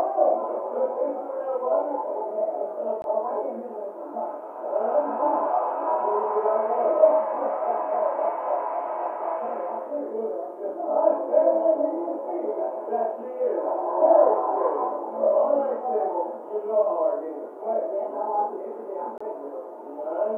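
The audio drops to silence twice, briefly. The first gap runs from 3.02 to 3.04 s and lasts 20 ms. The second runs from 19.18 to 19.21 s and lasts 26 ms. Each time the sound cuts out abruptly and then carries on. The likely cause is a Bluetooth stall. Radio interference delayed the wireless packets, and the headphones' buffer ran empty. Playback paused until the resent data arrived.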